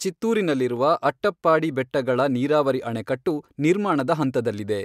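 At 4.01 s the speech carries a single sharp click, most likely from dropped samples. A fraction of a millisecond of the stream goes missing, so the waveform steps abruptly to a later value. No sound is lost, but the discontinuity produces a brief broadband tick.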